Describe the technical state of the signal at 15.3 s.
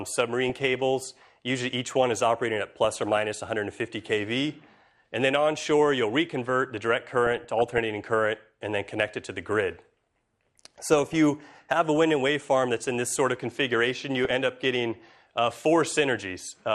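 At 15.3 s you're hearing MP2 compression, and it runs through the whole clip: dull top end, gurgly granular grit as upper sub-bands drop in and out and the rest get quantised coarsely. That's likely a low-rate Layer II encode, something like 80 kbps.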